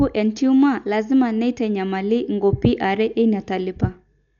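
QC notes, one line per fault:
Throughout: Dolby Digital compression, heavy. The speech has no content above 7 kHz, so it sounds dull and boxed-in, and a rough, fluttering noise clings around the voiced tones. This is likely the work of an AC-3 style encoder starved of bits, which fits a bitrate near 48 kbps. The band is cut short, many frequency lines get no detail bits at all, and the decoder fills those gaps with dither noise, giving the grainy shimmer.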